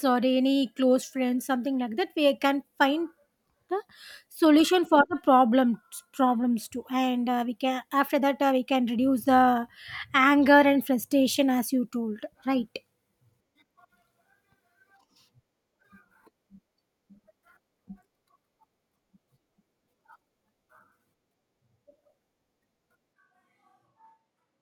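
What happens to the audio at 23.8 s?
From 23.14 s to the end, the sound abruptly turns roomy and hollow with thinner bass, likely a switch to a distant microphone. The spectrogram shows weaker lows, smeared reverberant tails and a noise floor about 25 dB below the speech, while the waveform level stays roughly unchanged.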